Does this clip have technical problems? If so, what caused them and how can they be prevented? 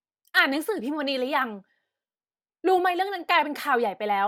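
No, there are no technical problems to hear here.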